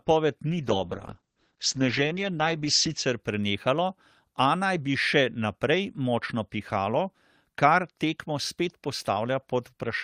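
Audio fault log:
0.46–3.25 s, call bitrate drop: the speech goes coarse, and the top end disappears, with everything above about 8 kHz gone where it was full-band before. That's the encoder being told to spend far fewer bits after the bandwidth estimate fell. The muffling and roughness fit a fall from something like 32 kbps to around 10 kbps. It stays at its worst for roughly 2.5 s before the bitrate climbs back and the detail returns.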